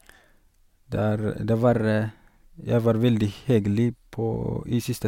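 From 1.63 s to 2.64 s the speech runs 6.2% fast and 104 cents sharp, then snaps back. This drift correction step likely came from clock-matching software raising its playback rate. On a spectrogram the harmonics jump up about a semitone for that stretch.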